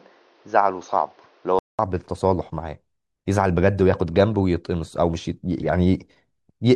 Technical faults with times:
0.00-1.79 input switched to a poorer device

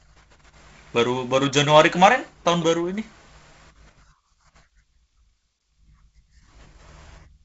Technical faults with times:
none

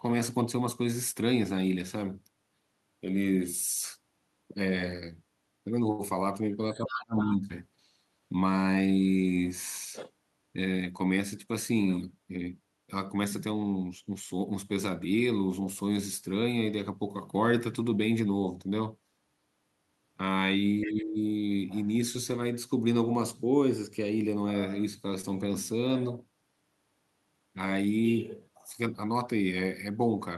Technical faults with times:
5.91-6.01 short stall from a late packet
6.74-7.49 speech suppressed in double talk
6.86-7.35 other side's voice leaking through
11.19-11.87 jitter buffer speed-up
20.81-21.03 other side's voice leaking through
20.84-21.19 speech suppressed in double talk
25.21-25.25 short stall from a late packet

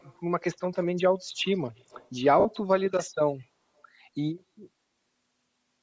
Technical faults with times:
0.00-5.83 Bluetooth LC3 compression
0.00-0.16 echo leak
0.79-0.87 echo leak
1.39-2.09 echo leak
2.40-2.46 lost LE Audio frames

